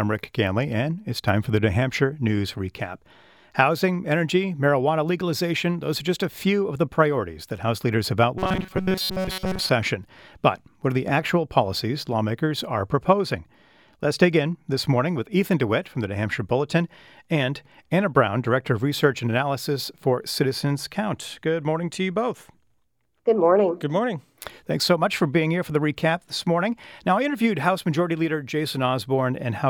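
Robotic sound from repeated short buffers runs from 8.38 to 9.69 s: the speech becomes a rigid, metallic buzz pinned at 188 Hz. Audio likely arrived too slowly, so a snippet of about 5.3 ms was looped repeatedly, skipping most of the real signal.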